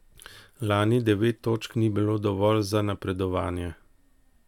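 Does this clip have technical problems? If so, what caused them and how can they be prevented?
No, no technical problems.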